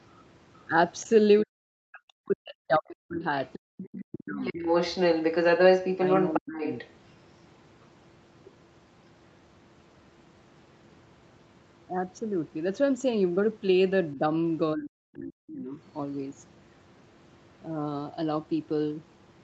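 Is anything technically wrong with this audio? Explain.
Yes. The speech has echo and echo-canceller faults.

Other side's voice leaking through, at 1.0 to 1.39 s, 3.46 to 6.9 s and 14.86 to 15.52 s. A second voice sits under the speech. It is about 30 dB down, then about as loud as the talker, then about 20 dB down. Likely cause: far-end loudspeaker sound reaching the microphone and surviving echo cancellation.

Speech suppressed in double talk, at 1.06 to 4.56 s, 6.4 to 6.65 s and 14.15 to 15.78 s. The talker's speech dips by up to about 40 dB in pieces. That adds up to roughly two seconds in the first span and under a second in the last. Likely cause: both sides talking together, so the canceller turned everything down.

Background gated by the echo canceller, at 3.59 to 3.73 s. The room sound drops out for about 150 ms, falling by about 40 dB. It comes back once the canceller releases. 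The canceller clamped the microphone hard while the loudspeaker was active.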